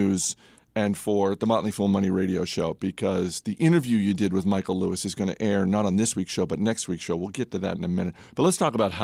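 No technical faults are audible.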